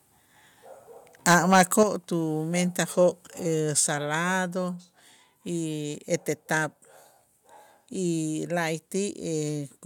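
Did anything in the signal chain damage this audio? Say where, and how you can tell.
Yes. From 1.26 to 1.82 s the loudest speech turns harsh and crackly, with flattened peak tops. This is microphone overload, likely from input gain set high enough that peaks ran about 7 dB past the converter's full scale, clipping a few percent of samples.

Right after, at 1.83 s, voice and background drop together by about 6 dB, then again at 3.87 s by about 3 dB. These are microphone volume step-downs, likely call processing reacting to the clipped peak by lowering the device input gain in single steps.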